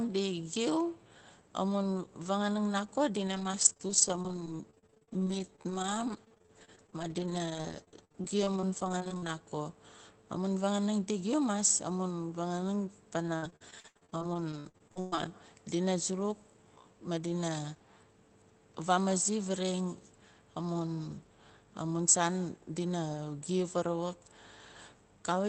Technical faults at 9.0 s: repeated packet loss (robotic sound)

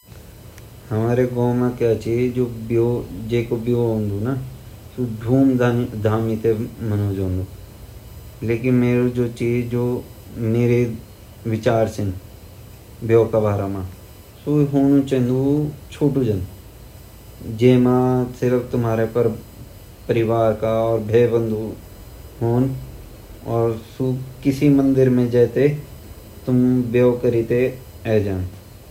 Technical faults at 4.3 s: USB whine

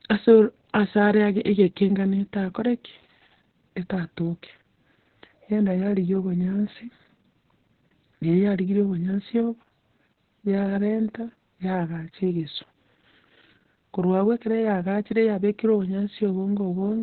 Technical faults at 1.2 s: Opus voice compression

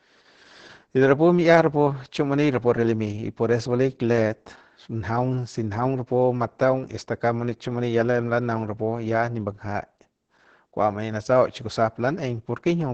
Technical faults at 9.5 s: Opus voice compression

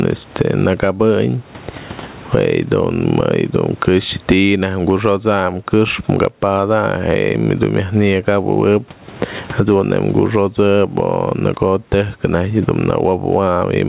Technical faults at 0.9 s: gain pumping

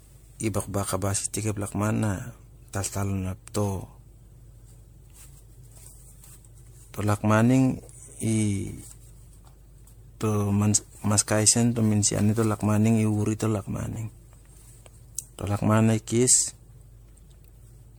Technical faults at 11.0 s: generation loss

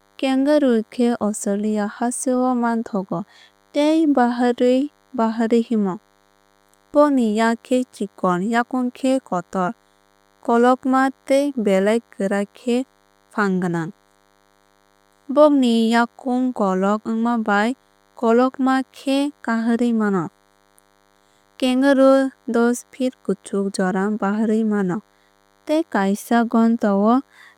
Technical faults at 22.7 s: DECT cordless phone buzz

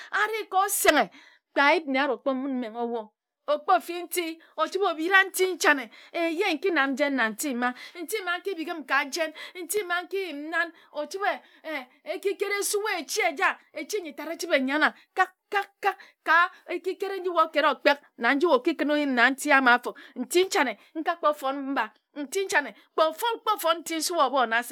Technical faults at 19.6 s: none

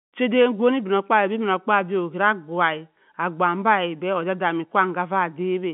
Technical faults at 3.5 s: none

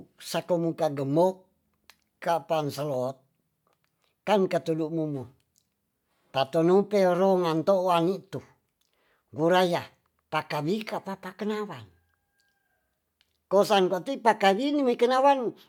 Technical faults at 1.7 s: none

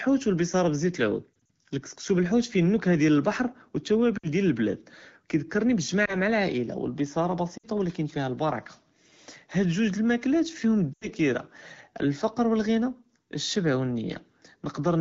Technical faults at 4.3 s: lost AMR speech frames

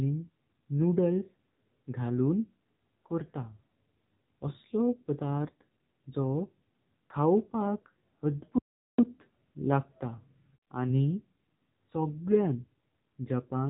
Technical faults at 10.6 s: AMR narrowband mobile codec

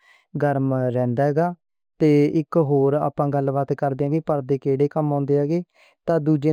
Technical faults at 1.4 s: imaging from linear upsampling

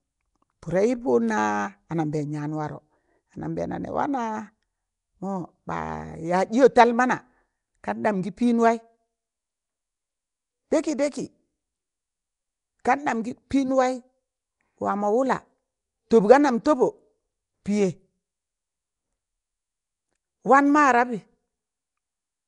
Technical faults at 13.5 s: Nellymoser compression; pre-echo

